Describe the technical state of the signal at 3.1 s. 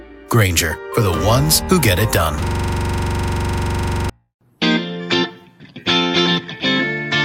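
At 3.1 s the sound has collapsed into a rapid, mechanical rattle, one tiny fragment of about 43 ms repeating about 38 times at roughly 23 Hz from 2.46 s to 4.10 s. This is a system hang loop: the computer or its driver stalled while the audio hardware kept replaying the same ring buffer. The loop length fits a 2048-sample buffer, and its repeat rate sits at the edge between a coarse buzz and a stutter.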